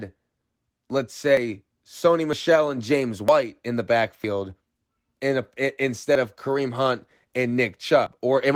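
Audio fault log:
1.37, 2.33, 3.28, 4.24, 6.15, 8.07 s: audio missing between chunks, likely from roughly one-second processing chunks each dropping a few tens of milliseconds at the boundary, heard as abrupt skips where the sound jumps forward.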